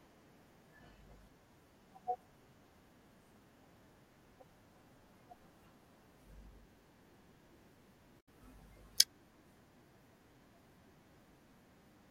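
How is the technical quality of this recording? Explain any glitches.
There's one glitch worth flagging, a short burst of damaged data in the compressed stream from about 8.17 to 8.28 s. For roughly a tenth of a second the speech breaks up. Some of the encoded bytes there were corrupted, so the decoder misread those frames, lost its place in the stream, and had to hunt for the next valid frame header before it could carry on decoding cleanly.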